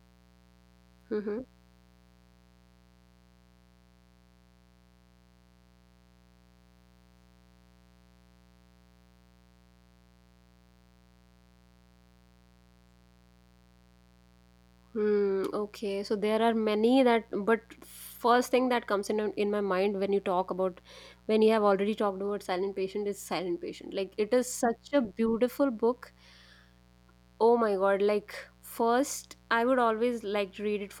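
Mains buzz runs throughout, about 35 dB below the speech: sharp switching spikes from the 60 Hz supply, 120 per second, leak in as a steady, raspy buzz.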